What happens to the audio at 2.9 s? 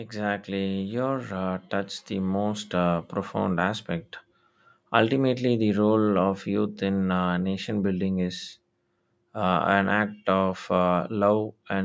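At 2.9 s the level is near the end of an automatic gain rise running from 1.69 to 3.01 s. Judging the input too quiet, the gain control lifts it by about 4 dB over roughly 1.3 s, so the speech and the background swell together, unlike a sudden step change.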